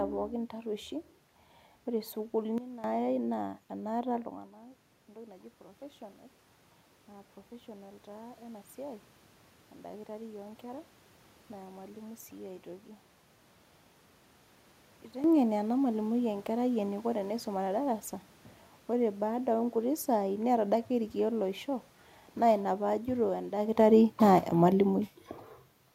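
Around 4.0 s the level of the speech drops by about 17 dB as the talker moves away from the microphone. The automatic gain rising response then follows. From 4.47 to 6.09 s the gain control, sensing a quieter input, raises its gain by about 3 dB. The voice and the room noise swell together over those 1.6 seconds. On a waveform the envelope climbs as a slow ramp rather than a step. On a spectrogram the noise floor brightens across all frequencies at the same time as the speech.

From 22.38 to 25.06 s the automatic gain falling response takes over. The gain control judges the input too loud, or its background noise too strong for the gain it started with, and it lowers its gain by about 4 dB over roughly 2.7 seconds. The speech starts out loud and then sinks, and the room noise sinks with it. A waveform shows the peaks tapering off gradually. A spectrogram shows the whole image, background included, dimming evenly instead of just the voice.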